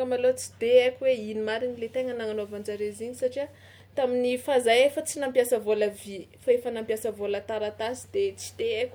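Nothing in the recording stands out as a fault.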